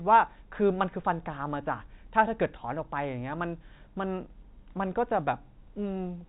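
A speech clip in ordinary G.711 telephone coding, with nothing technically wrong with it.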